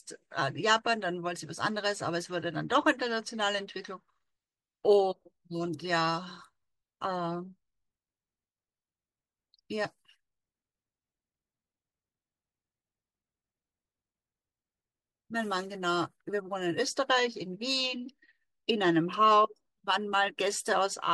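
No technical faults are audible anywhere in the recording.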